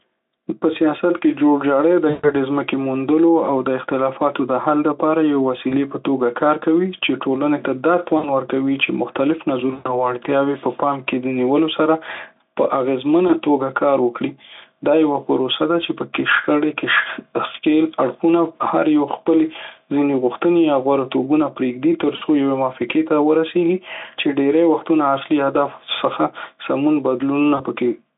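Gain pumping runs throughout the speech: the gain is pulled down on louder syllables, swinging by around 10 dB, likely from excessive input gain driving a fast limiter.

VoIP packet loss concealed by the speech codec occurs at 2.09–2.31, 5.69–5.76, 8.17–8.34, 9.73–10.12, 13.27–13.35, 22.15–22.22 and 27.55–27.61 s. At each point the decoder extrapolates stretched, fading sound to fill the missing audio. The longest bridged gap, about 140 ms at 2.09 s, fits roughly seven 20 ms frames.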